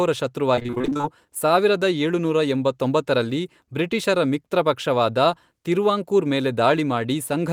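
From 0.55 to 1.05 s, repeated packet loss gives the speech a choppy sound. Thirteen short holes, none longer than about 21 ms, were each patched by stretching the last sound forward. Nearly half that half-second is concealed filler. The result sounds choppy, with pieces missing.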